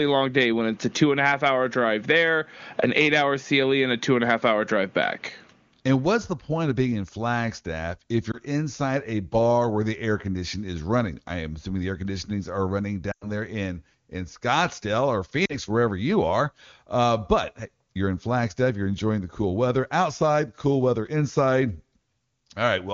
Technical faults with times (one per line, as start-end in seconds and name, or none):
8.31-8.38 lost AMR speech frames
13.11-13.31 lost AMR speech frames
15.46-15.56 lost AMR speech frames